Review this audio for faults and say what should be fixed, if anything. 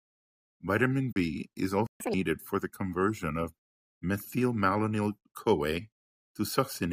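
Three faults need fixing, all clustered between about 1.1 and 2.1 s of the speech.

At 1.11 to 1.16 s there is a corrupt frame concealed: the AAC decoder detected damaged bits and covered them itself, leaving a soft-edged dip about 50 ms long, which fits two lost frames. The rounded edges and unbroken timing set it apart from an undetected bit error, which would produce a harsh squeak or burst instead of a muffled hole. Protecting the stream with error checking and retransmission, or with forward error correction on the transport, would prevent this.

From 1.87 to 2.00 s there is a playback stall, about 137 ms of total silence in mid-flow. The likely cause is the player running out of buffered data or its output thread being blocked. Unlike the concealed frame, this is a hard, dead-silent gap much longer than a frame, and the sound resumes exactly where it left off, with nothing skipped. 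A deeper jitter buffer and keeping the audio thread free of blocking work would prevent it.

From 2.00 to 2.14 s, just before "for the conversion of", the player does a catch-up at higher speed. It resamples its backlog at 2.0 times normal rate, so speed and pitch jump together by around ten semitones, then drop back to normal. Because pitch rises along with tempo, this is resampling rather than time-stretching, which would keep pitch steady. Using pitch-preserving time-scale adjustment with a gentler rate, or dropping the backlog, would prevent this.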